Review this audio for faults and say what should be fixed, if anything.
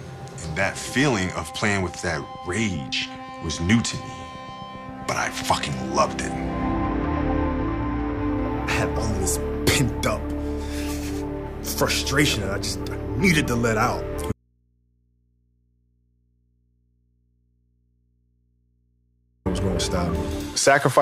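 From 14.32 to 19.46 s the sound snaps to faint hum about 40 dB down, an audio dropout to a faint residue, likely from a source lost ahead of a still-live input. Secure and monitor the source connection and cabling so the feed cannot drop out during recording.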